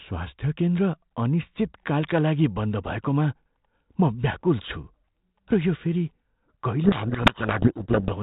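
A codec payload misread runs from 6.84 s to 8.12 s. The speech travels as G.726 ADPCM, and the light telephone-band coding before this point fits 32 kbit/s. Here the decoder unpacks each code word with its bits in the wrong order, so the prediction differences are read wrong. The speech is buried in harsh, grinding distortion until 8.12 s.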